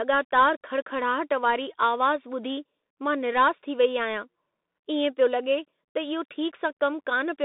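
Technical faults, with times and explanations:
Throughout, Bluetooth CVSD headset codec: the speech is confined to a narrow telephone band of roughly 250 Hz to 3.7 kHz, with nothing above 3.8 kHz. The codec's one-bit delta modulation, at a 64 kbps rate, lags fast loud transients, so sibilants turn scratchy and a granular hiss sits under everything.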